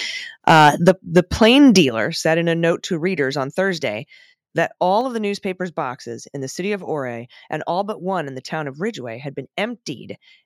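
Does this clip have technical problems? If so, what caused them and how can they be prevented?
Yes. Microphone overload from 0.47 to 1.8 s, just before "said in a note": peaks run about 7 dB past the converter's limit, flattening a few percent of samples into harsh crackle, likely from input gain set too high. Prevent it by lowering the microphone input level so loud syllables peak well below full scale.

Microphone volume stepped down at 0.89 s (about 3 dB), 1.89 s (about 6 dB, before "said in a note") and 5.01 s (about 4 dB, before "of the newspaper's boxes"): the level drops abruptly each time, likely the call software's automatic gain control cutting input after the clipping. Prevent it by setting a sensible fixed input level and disabling automatic microphone adjustment.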